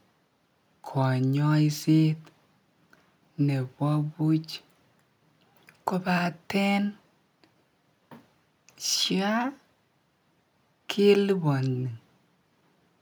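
Nothing goes wrong anywhere in this speech recording, so there's no technical fault to point out at any moment.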